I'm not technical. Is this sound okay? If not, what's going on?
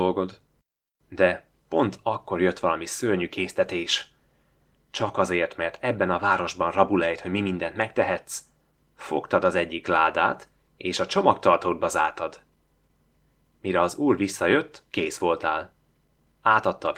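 Yes, the speech comes through fine: it has passed through Opus voice compression with the full frequency range kept, and nothing in it needs fixing.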